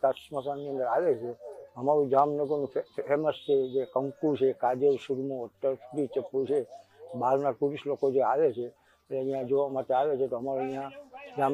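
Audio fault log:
No audible faults detected.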